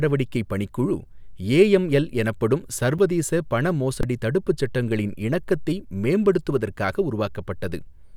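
Underrun with held sample at 2.98 s, after "ஏஎம்எல் எனப்படும்", and from 4.01 to 4.03 s, before "தடுப்பு சட்டங்களின் இணக்கத்தை": the output buffer emptied and the converter held its last value. The sound flattens briefly, about 6 ms and then 21 ms, the second fitting a 1024-sample buffer. The audio from each span was lost.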